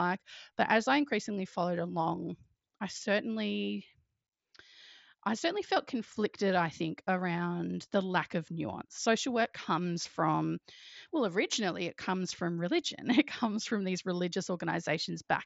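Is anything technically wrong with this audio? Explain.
No, the speech is carried over a Bluetooth mSBC headset link working as intended: nothing sits above about 7.7 kHz, and the light grain on louder moments is normal for that wideband codec at a rate that fits around 61 kbps.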